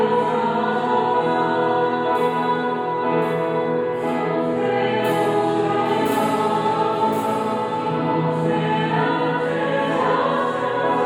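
A doubled audio track runs throughout. A second copy of the sound trails the original by about a second, roughly 5 dB quieter. It carries the full band with no decay or room colour. A slower capture path likely recorded the audio twice.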